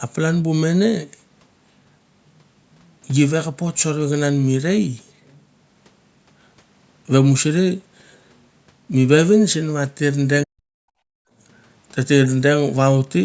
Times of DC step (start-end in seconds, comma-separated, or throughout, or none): 3.69-13.25